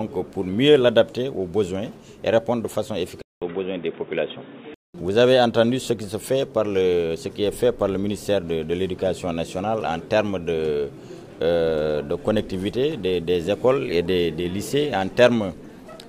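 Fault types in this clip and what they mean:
Input switched to a poorer device: from 3.22 to 4.94 s the sound turns dull, cut above 3.8 kHz, after a 200 ms gap, with faint new background noise, likely a change of input.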